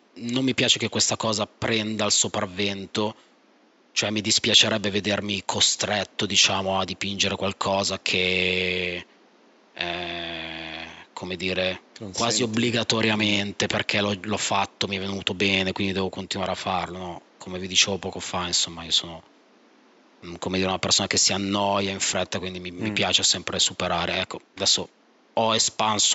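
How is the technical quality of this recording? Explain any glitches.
No glitches; the recording has no technical faults.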